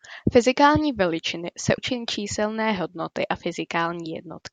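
At 1.77 s, just after "veličiny se", the speech jumps abruptly forward with a brief blip, and the next sound picks up mid-stream rather than where the phrase was heading. This is a stream segment skipped, most likely one chunk of a segmented stream failing to load so that the player continued with the following one. On a waveform there is a hard splice with a discontinuous edge; a spectrogram shows a thin vertical broadband line where the harmonic patterns change without transition.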